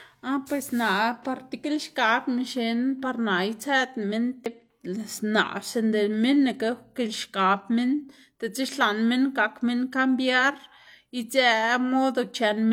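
Speech recording with damaged data in the compressed stream at 4.46 s: a brief glitch where corrupted bytes make the decoder misread a frame, lose sync, and resume at the next valid header.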